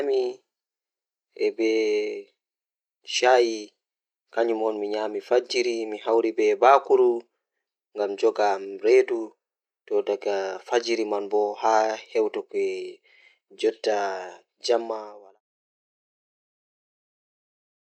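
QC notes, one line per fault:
Nothing stood out on listening, and the speech eases out in a smooth fade that ends at about 15.4 s.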